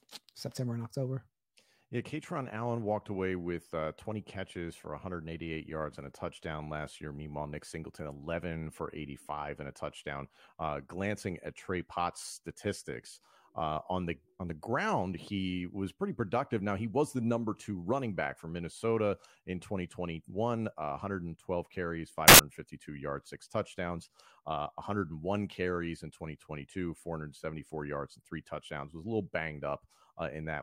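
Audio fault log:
22.28–22.39 s: samples built from the wrong bytes. For about 0.11 s the speech gives way to a burst of loud, harsh broadband noise. The bytes of each sample are being assembled out of place, through a one-byte offset, swapped byte order or a misjudged alignment, so the rapidly fluctuating low-order bits land in the most significant position. Each value then swings almost randomly across the full range, which replaces the speech with broadband noise until correct framing resumes.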